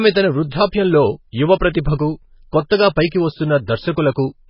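Heavy MP3 compression runs through the whole speech clip. Nothing sounds above 5.5 kHz, so the treble is cut off. Weak frequency lines drop in and out between frames. The sound turns watery and swirly, and s sounds chirp metallically. This points to a very low bitrate, likely around 16 kbps.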